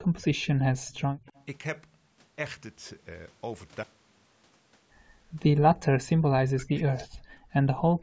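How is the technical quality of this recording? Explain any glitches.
The recording shows echo-canceller trouble typical of a speakerphone call, with three kinds of glitch in the first second and a half and again near the end. The call path also cuts off everything above 8 kHz.

Speech suppressed in double talk occurs at 0.1–0.48 s, 1.05–1.27 s and 6.0–7.01 s, with the last lasting about a second. The voice drops by roughly 20 to 30 dB, most likely because the canceller could not separate the talker from the loudspeaker echo of the other side's speech and attenuated both.

Echo leak appears at 0.87–1.0 s, 1.27–1.45 s and 7.19–7.23 s as a faint copy trailing the voice by 98 ms, sitting about 30 to 40 dB below it. The likely cause is a loudspeaker on one side of the call feeding its microphone with residual echo that its canceller failed to remove.

Background gated by the echo canceller occurs at 7.29–7.5 s. 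The room tone dips by about 21 dB for roughly 200 ms, then recovers. The canceller clamped the microphone hard while loudspeaker output was present and released it once playback stopped.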